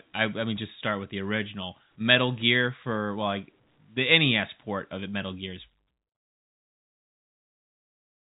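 No technical faults are present in this speech recording: it has the narrowband character of a telephone-grade call path, with nothing above 4 kHz, consistent with G.711 A-law coding, and it ends with a deliberate, smooth fade-out that starts at about 5.5 s and reaches silence at 6.18 s.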